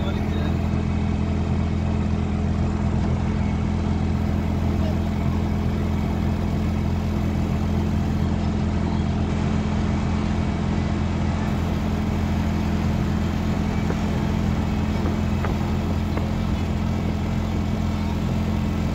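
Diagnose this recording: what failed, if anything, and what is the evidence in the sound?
Codec stage: a Bluetooth SBC bit pool drop from 0.70 to 4.14 s and from 8.25 to 11.47 s. Treble dulls and gritty noise rises, and a spectrogram shows the top band emptying. This fits a bit pool cut from 28 to 13 (102 kbps), starving high sub-bands and coarsening the rest.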